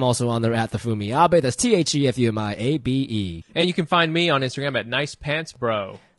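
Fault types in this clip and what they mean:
Low-delay AAC compression: The speech carries a plainly audible rough, grainy texture from start to finish, with noise filling the gaps between harmonics and a thin, synthetic-sounding top band. That pattern likely comes from AAC-ELD at a low rate, consistent with about 32 kbps. Unlike a brief dropout, the damage never comes and goes; it colours every syllable across the whole clip.
AAC frame loss with concealment: At 3.61 to 3.64 s, just before "you can find me", a brief patch replaces the real signal. The decoder has rebuilt that stretch from the last good spectrum instead of the true audio. The damage fits a single lost frame of about 20 ms. It is too short to fade toward silence. It differs from the steady codec roughness because it is one isolated patch, not a constant texture.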